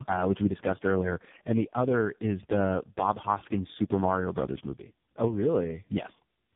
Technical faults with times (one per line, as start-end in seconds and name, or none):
0.00-6.56 tandem speech coding